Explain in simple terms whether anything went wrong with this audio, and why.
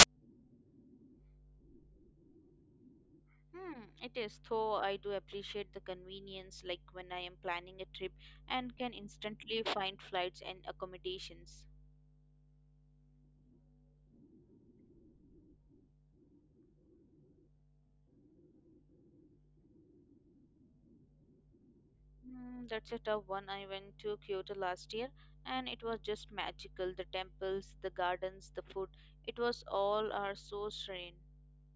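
File tags played as audio, from 0.00 to 0.03 s, right at the start of the speech. A sound file can carry extra information alongside the recording, here a cover picture stored in compressed form. The player mistakenly treated that picture data as if it were sound. Because compressed data looks random, it came out as a short, very loud hiss of static that switches on and off abruptly.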